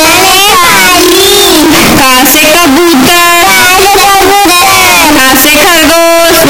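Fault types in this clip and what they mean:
Float read as integer: throughout the clip, the audio is blasting and harsh, with the waveform flattened into a near-square shape sitting at an almost fixed, high level, and quiet background noise pushed up to the same level as the main sound. The likely cause is 32-bit floating-point samples being read as 32-bit integers, so each sample's sign and exponent bits decide its value. Pitch can still be followed.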